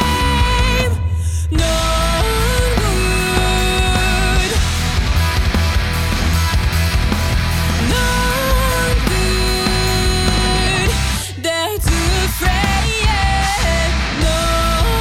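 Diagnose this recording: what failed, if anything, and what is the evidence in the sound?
Nothing stood out on listening that would point to a failure at any stage of the chain.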